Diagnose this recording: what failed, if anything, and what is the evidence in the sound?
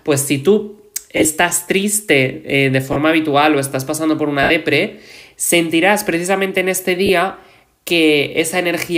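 Brief noisy smears replace the sound at 1.17–1.25 s, 2.93–2.96 s, 4.43–4.50 s and 7.06–7.09 s. These are lost LE Audio frames on the Bluetooth link. The LC3 decoder covered each gap, 30 to 70 ms long, by reusing the last spectrum with randomised signs.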